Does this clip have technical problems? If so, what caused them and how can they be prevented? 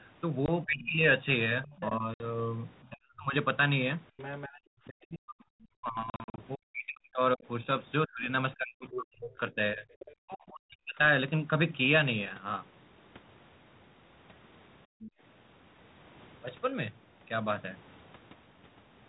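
Yes. Four kinds of fault are audible.

Packet loss on the ADPCM call: hard-edged silent holes appear at 0.46–0.49 s (20 ms lost), 2.14–2.26 s (60 ms) and 6.10–6.43 s, where 180 ms is scattered over 280 ms with runs up to 40 ms. After each gap the decoder's adaptive predictor and step size have drifted from the sender's, so the sound resumes slightly distorted before recovering. Using a more reliable link, jitter buffering and concealment that resynchronises the ADPCM state would prevent this.

Speech suppressed in double talk: from 0.65 to 3.34 s and again from 4.85 to 10.99 s, the main talker's speech dips, thins or breaks up, with about 40 dB at its deepest. This totals about 1 s in the first stretch and 4 s in the second. The likely cause is the echo canceller failing to separate the near talker from loudspeaker echo while both spoke, and attenuating everything. A better double-talk detector and less aggressive suppression would prevent it.

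Other side's voice leaking through: a second voice comes through at 0.84–1.96 s and 4.17–4.60 s, about 15 dB below the main speech. Shorter scraps appear at 8.91–9.01 s (about 10 dB below), 10.00–10.13 s and 15.01–15.11 s (about 20 dB below). The loudspeaker's output likely reached the microphone and was not fully cancelled. Lowering speaker volume, using a headset or improving the canceller's convergence would prevent it.

Background gated by the echo canceller: at 14.86–15.01 s the room sound drops by about 38 dB for roughly 150 ms. The canceller clamped the microphone while the loudspeaker played, then released it. Softening the gating and using comfort noise would prevent the audible hole.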